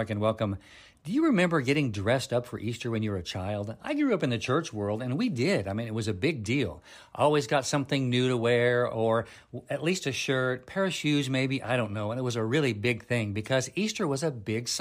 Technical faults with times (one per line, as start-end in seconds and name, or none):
none